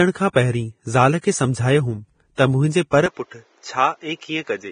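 A speech clip, likely run through Vorbis encoding at a low rate: the encoder has kept a smooth spectral outline but quantised the fine detail on top of it very coarsely, which fits a bitrate in the region of 23 kbps. The result is heavy codec damage heard across the whole clip, with nothing above 9.7 kHz, a hissy, grainy treble where detail has been turned into noise, roughened tones and blurred onsets. The same transform coding causes pre-echo: where a sharp onset lands late in a coding block, the quantisation noise meant for the loud part spills into the quiet moment before it. A short hiss leads into onsets at 0.33 s (about 30 ms), 1.21 s (about 27 ms), 2.35 s (about 34 ms) and 2.91 s, so those attacks sound smeared rather than crisp. At 3.06 s, just after "मुंहिंजे पर", the input was likely switched to a poorer device, and the recording stays on it until the end with no gap at the changeover. 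From that point the band stops at 7.6 kHz, so the sound turns duller and boxier. The level drops by about 5 dB, and a new background noise appears, sitting some 35 dB below the signal.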